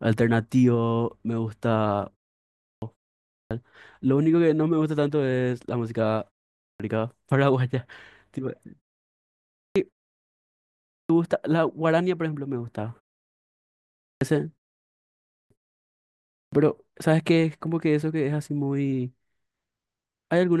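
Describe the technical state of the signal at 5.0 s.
At 5.0 s the speech signal is intact, with no fault present at that moment.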